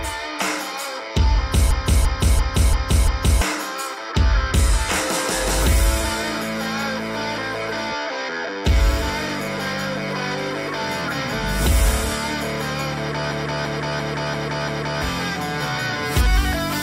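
The audio has two system hang loops, from 1.71 to 3.41 s and from 13.31 to 15.02 s. Each time, one 341 ms slice repeats five times at about 2.9 Hz, which fits the output device replaying a 16384-sample ring buffer while the system stalled. Around one and a half seconds of real audio is lost each time. On a waveform or spectrogram, each region shows an identical block tiled end to end with hard seams.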